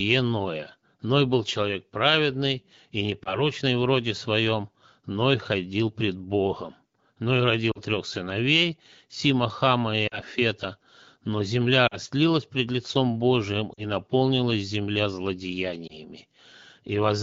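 Radio errors corrupted AMR speech frames in this wideband (HD Voice) speech clip, and the decoder concealed each loss by repeating the last good pitch and vocal tract settings at falling gain. The result is a brief warble or dip at 3.24–3.43, 7.71–7.80 (before "трех сыновей"), 10.07–10.20, 11.87–11.96 (before "пред лицом"), 13.73–13.86 (before "наполнилась земля") and 15.88–15.97 s, each fitting one or two lost 20 ms frames.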